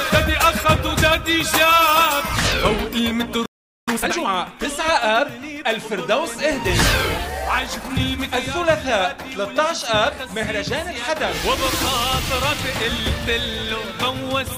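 At 3.46 s the player most likely ran dry of buffered data, or had its output thread held up, and a playback stall follows: the sound cuts off in mid-flow and the output stays silent until 3.88 s, a gap of about 0.42 s.

From 3.88 s to 4.28 s the player works off the backlog built up during that gap with a time-compressed catch-up. It trims out short slices of the signal and cross-fades across each join, so the material runs at 2.0 times its normal rate while the pitch stays where it was. Across those 0.4 s the sound is noticeably hurried before normal pacing returns.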